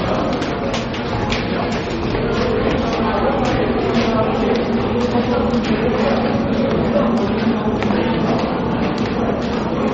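From start to finish the audio has a hard ceiling around 8.3 kHz and a watery, swirly texture, plainly audible throughout. That's likely MP3 compression at a low bitrate, something near 32 kbps, with the encoder chopping the treble and flickering weak frequency detail on and off.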